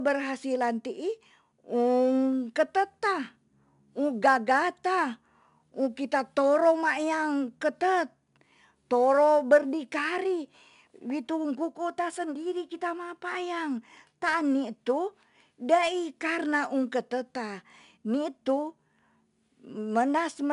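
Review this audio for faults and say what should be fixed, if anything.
4-bit ADPCM compression runs throughout. Gritty hiss rides every loud syllable, and attacks distort. Nothing reaches above 10.6 kHz, which points to a sample rate near 22 kHz. Keep the master as uncompressed PCM, or use a modern codec at a higher rate.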